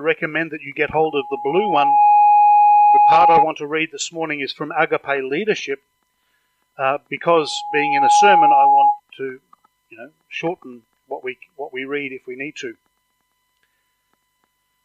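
From 0.92 s to 3.46 s, a loudspeaker feedback squeal builds: a steady 831 Hz tone swells over about a second to roughly 10 dB above the sound, as the microphone-to-speaker loop exceeds unity gain. It recurs at the same pitch from 7.31 s to 9.00 s, rising faster, in under a second.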